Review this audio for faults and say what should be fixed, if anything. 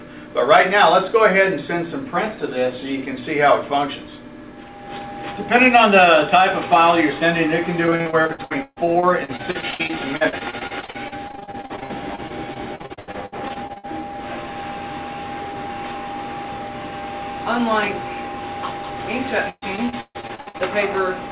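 Repeated packet loss (robotic sound) occurs at 7.86–13.85 s and 19.49–20.61 s. Dozens of holes, none longer than about 140 ms, are patched by extending the preceding sound, covering about 31% and 48% of each stretch. Choppy, robotic audio results. A steadier network link and a deeper jitter buffer would prevent this.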